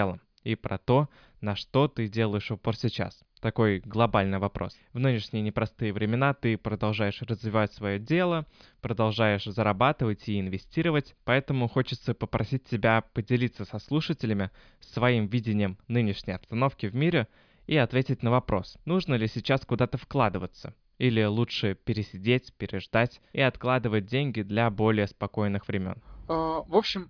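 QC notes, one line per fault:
Nothing to flag here; the speech comes across without any technical trouble worth noting.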